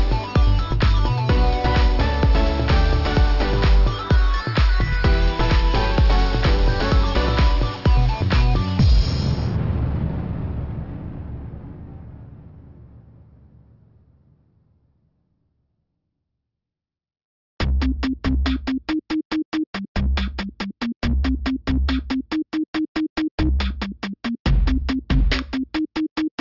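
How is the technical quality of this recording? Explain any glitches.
Quality is compromised by one fault running through the entire recording. Aliasing: content above about 6 kHz folds back as gritty, metallic tones, which fits downsampling to around 12 kHz without an anti-alias filter.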